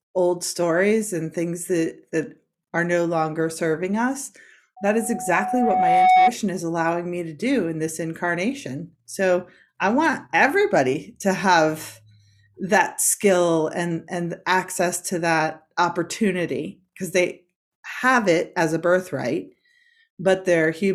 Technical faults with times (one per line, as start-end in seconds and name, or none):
4.76-6.34 loudspeaker feedback squeal